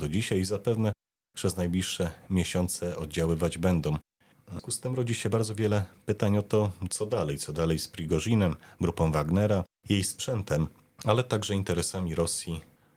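At 4.59 to 4.61 s a skip ahead occurs: about 0.4 s of audio was discarded while later packets were already queued, so playback leaps straight to the newer material. The speech joins almost directly across the cut, with no gap or filler, and a short piece simply vanishes.

From 4.87 to 6.18 s a jitter buffer speed-up follows, as the receiver, holding more audio than its target, trimmed tiny pitch-period slices again and again, removing roughly a tenth of a second in total. The speech runs at about 108% pace with unchanged pitch, sounding slightly rushed.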